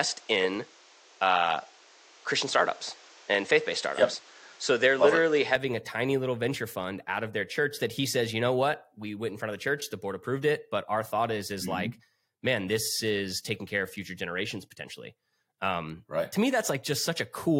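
From the start to 5.56 s, the speech is band-limited with nothing above 8.2 kHz, sits about 5 dB apart in level, and carries its own background noise roughly 30 dB down. At "a tiny little venture" it clears without any gap. The likely cause is an input switched to a poorer device, not a filter, since tone, level and noise floor all change together.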